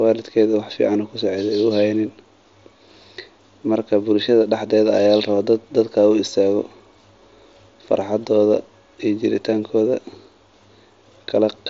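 Speech recording with no technical faults detected.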